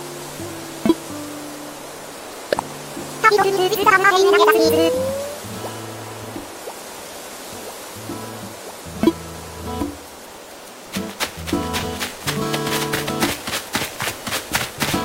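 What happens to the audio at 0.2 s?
Nothing goes wrong at 0.2 s; the audio is intact at that moment.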